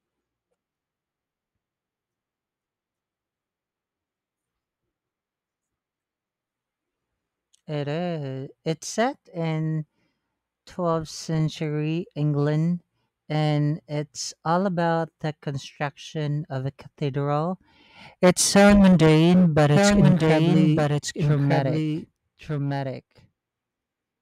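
Right after "so mundane but", at about 19.76 s, a doubled audio track kicks in and runs to the end of the clip. A second, full-band copy of the speech trails the original by roughly a second, a bit quieter, maybe about 5 dB down, with no decay or room colour, and it starts abruptly. It sounds like the talker is being echoed back clean. The likely cause is the audio being captured again through a slower path, or an edit leaving two copies out of step.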